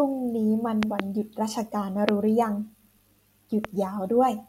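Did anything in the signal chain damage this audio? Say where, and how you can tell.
Yes. Loud pops sit on top of the speech at three points. Two come in quick succession between 0.83 and 1.02 s, peaking roughly 20 dB above the signal. A single one at 2.09 to 2.11 s is the strongest, around 25 dB up. A weaker one at 3.65 to 3.67 s is around 15 dB up. The speech carries on underneath each pop. That points to sudden voltage steps added in the analogue wiring, likely a plug, switch or static discharge.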